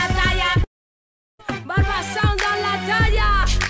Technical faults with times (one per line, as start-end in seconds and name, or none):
0.64-1.41 long network dropout